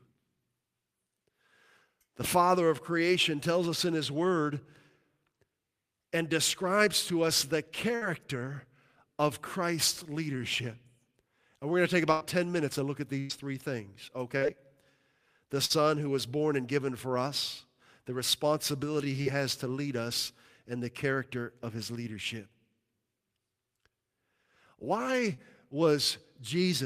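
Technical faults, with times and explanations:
7.95–8.04 s, 12.12–12.38 s and 13.20–13.32 s (the last between "minutes and look at" and "three things"): burst of packet loss. Several consecutive packets never arrived, so the receiver stretched the last sound for roughly 60 to 95 ms while fading it. A held buzz or dying hiss results, then audio resumes with about 40 to 80 ms gone.
14.37–14.44 s (after "three things"), 15.65–15.73 s (before "who was born and"), 19.22–19.29 s and 25.34–25.41 s: short concealed packet loss. About 40 ms failed to reach the decoder in time each time, and the decoder patched the hole by extending the preceding pitch or noise before blending back, leaving a brief smear or wobble.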